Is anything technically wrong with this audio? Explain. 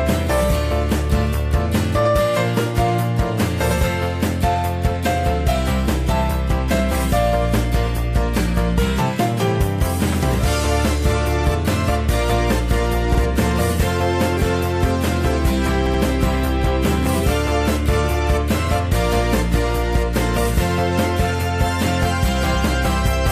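Yes, there are repeated frames. At 13.14 s a 52 ms block plays twice. At 15.86 s a 78 ms block plays three times. In both spots a short run of compressed frames was duplicated, so the decoder replays the same slice. This causes a brief stutter and adds about 52 ms and 157 ms to the audio.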